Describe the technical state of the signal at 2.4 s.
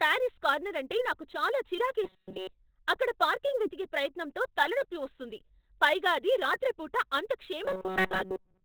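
At 2.4 s you're right inside a stretch of robotic sound from repeated short buffers, running from about 2.04 to 2.49 s. The speech collapses into a stiff, metallic buzz pitched at 188 Hz. That's the likely result of fresh audio arriving too late, so the playback loops a tiny chunk of about 5.3 ms over and over, and that loop length sets the buzz. Most of the real audio in that window, roughly two thirds or more, just gets skipped.

Underneath that, the whole clip carries heavy Opus compression damage. It's narrowband, with nothing above about 4.3 kHz, and it has the muffled, hoarse quality of the speech-oriented SILK mode. The likely cause is a very low bitrate, something in the region of 12 kbps, which forces the encoder to shed the upper band entirely. So even the buzz at 2.4 s sounds dull and boxy rather than bright.

There's also sample clock jitter throughout. The converter's timing wobbles by a few microseconds, so each sample lands slightly off. 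The error scales with how steeply the waveform is moving, so you get a hiss or grit riding on the louder, brighter parts, sitting roughly 25 dB below the signal. During the buzzing stretch it adds roughness on top. In the gaps between sounds it disappears.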